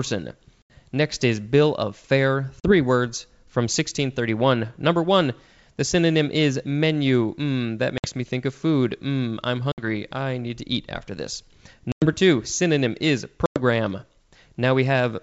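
Speech carried over a wideband G.722 link has packet loss on an ADPCM call, with silent gaps of 40 to 100 ms near 0.62, 2.60, 7.98 (before "me think of food"), 9.72, 11.92 and 13.46 s. Each hole is a run of a few lost packets filled with silence. On resumption the decoder's adaptive predictor and step size no longer match the sender's and must re-converge.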